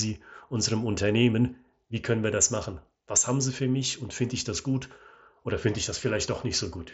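Nothing stood out on listening to this speech.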